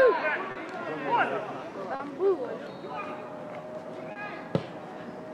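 Three brief hitches stand out where a sound is held too long, with a faint buzz or dip, at 0.51 to 0.57 s, 1.96 to 2.02 s and 4.12 to 4.18 s. Each is a short stall from a late packet. The jitter buffer ran dry, and the receiver stretched the last sound by about 40 ms until the packet arrived. It then resumed from the same place, so nothing is lost, but the timing shifts later by about 40 ms each time. Underneath these, small timing hiccups recur through the whole clip at uneven intervals, with brief repeated slivers. This is clock drift between sender and receiver. The sender's clock runs roughly 3% slow, so the buffer keeps draining, and the receiver repeatedly pads with repeated fragments.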